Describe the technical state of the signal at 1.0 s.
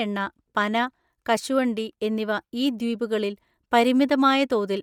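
At 1.0 s the speech carries a breathy, grainy edge in its upper range, as it does for the whole clip, and the codec damage is plainly audible. The likely cause is Bluetooth LC3 compression: the transform codec works in 10 ms frames and, short of bits, discards much of the upper spectrum and fills those bands with synthetic noise. The degree of damage fits a bitrate around 48 kbps.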